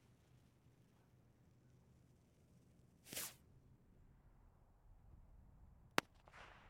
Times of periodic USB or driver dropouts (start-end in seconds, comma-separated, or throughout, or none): none